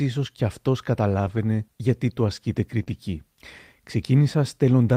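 Just after "ίσω κι αυτό", from 1.25 to 1.39 s, there is a lost packet rebuilt from error correction. About 80 ms of audio, which fits four 20 ms frames, never arrived. The decoder played the low-bitrate copy carried in the following packets, so there is no gap. The speech just turns grainy and hissy until "γιατί του ασκείται" begins. On a spectrogram the harmonics in that stretch look blurred and speckled with noise. The waveform stays continuous but looks coarser.

The same fault returns for a single frame at 2.79 to 2.81 s, a roughly 20 ms rough patch. After "γιατί του ασκείται", from 2.83 to 2.88 s, comes a short concealed packet loss. About 20 ms was missing, and the receiver spent about 23 ms extending the preceding sound before blending back. It is heard as a quick smear or wobble.

Immediately afterwards, 2.88 to 2.94 s, a further 40 ms is rebuilt from error correction. It has the same noisy, roughened texture and the same speckled spectrogram patch.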